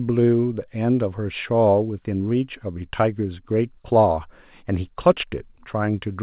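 No technical faults can be heard in this speech clip. It carries the narrow band of G.711 telephone coding, with nothing above 4 kHz and a faint noise floor that rises and falls with the signal, which fits mu-law coding at a telephone sampling rate.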